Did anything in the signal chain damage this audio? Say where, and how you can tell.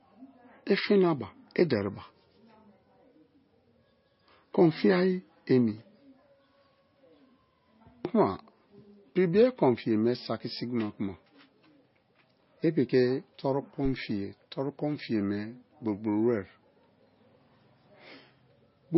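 Yes. Codec stage: heavy damage throughout, with a hard spectrogram ceiling at 5.6 kHz and watery, flickering detail. This points to likely MP3 compression, at a bitrate around 24 kbps.

Analogue wiring: a phantom power thump at 13.85 to 13.95 s. A supply step passes through the coupling capacitors, and the waveform shows one deep swing decaying within 22 ms.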